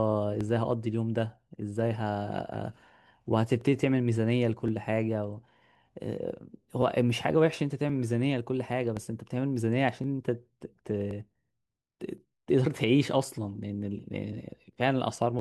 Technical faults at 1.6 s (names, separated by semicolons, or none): clock drift buffer slips